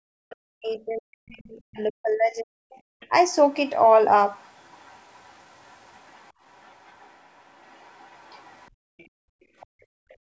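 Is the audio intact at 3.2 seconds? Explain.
No. From 3.0 to 3.7 s, a faint second voice sits far beneath the main speech. This is the other side's voice leaking through, and the likely cause is acoustic echo: the talker's device plays the far end over its loudspeaker, the microphone picks that sound back up, and the echo canceller fails to strip all of it out, leaving this brief residue.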